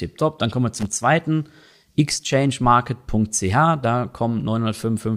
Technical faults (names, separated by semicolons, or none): loose connector crackle